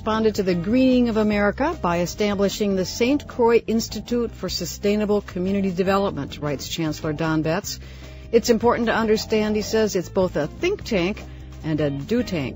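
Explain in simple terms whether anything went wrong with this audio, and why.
Nothing went wrong here: the sound runs along steadily with no dropouts, glitches or interruptions anywhere to point to.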